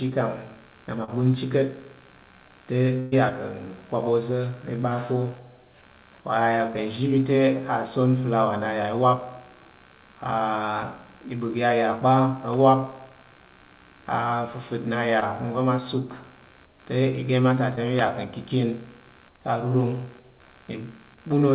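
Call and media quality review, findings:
Computer activity noise, throughout: processor, graphics or mouse load currents modulating the shared audio ground. Buzzing, chirping texture pulsing around 70 Hz, roughly 30 dB below the speech, rising and falling with machine activity rather than with the talker.

Short concealed packet loss at 1.04–1.10 s, 15.20–15.23 s and 17.75–17.79 s: about 40, 20 and 20 ms never reached the decoder. Concealment extrapolated the last sound and crossfaded back, leaving brief smears or wobbles after "na ma", after "na ya" and before "mi ya ka".

Burst of packet loss at 3.00–3.14 s: about 120 ms of consecutive audio lost or late. The concealer held and faded the last sound across the gap, so a sustained buzz or hiss replaces the missing stretch and speech resumes further on. The band stopping at 4 kHz fits G.711 A-law narrowband.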